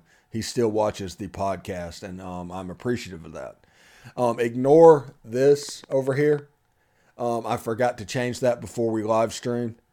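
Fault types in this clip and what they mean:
Train of clicks: from 5.49 to 6.40 s, about ten near-identical pulses arrive at 10 per second with uneven spacing, roughly as loud as the speech, likely from interference or a faulty connection. Unlike random crackle, the clicks share one shape and form a single burst.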